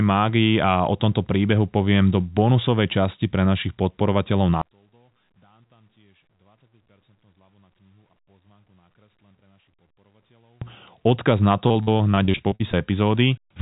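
Speech runs through a narrowband call path, with nothing above 4 kHz, as expected for a G.711 A-law link at 64 kbps. From 4.62 s to 10.62 s, right after "pre našich podporovateľov", the voice nearly disappears, dropping by about 39 dB and leaving only a faint residue. That pattern points to one channel inverted: with one stereo side in reversed polarity, the centred voice cancels almost completely when the two channels are summed to mono. This is the likely cause of the dropout. From 11.68 s to 12.75 s the sound turns choppy and robotic because of repeated packet loss. About a dozen short holes, the longest 43 ms, are each patched by extending the preceding sound. Roughly 0.3 s, close to 29% of that stretch, is concealed audio rather than the original, giving the broken texture.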